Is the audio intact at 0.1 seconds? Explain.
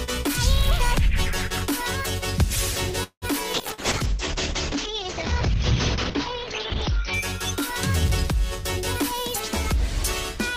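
Yes, at 0.1 s the audio is intact, with no dropout, click, distortion or other fault at that moment.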